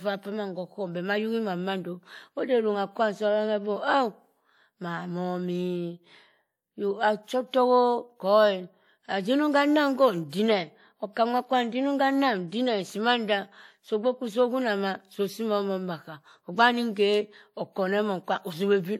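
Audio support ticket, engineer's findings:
Pre-echo at 10.29 to 10.33 s. Short hiss audible just before a sharp speech onset, about 34 ms long. Attack sounds softened and smeared rather than crisp. Probable component: transform codec in the encode path. Mechanism: quantisation noise is spread across the whole block, so noise sized for the loud attack also fills the quiet lead-in. The 34 ms spread points to a long transform block with no short-block switching on this transient.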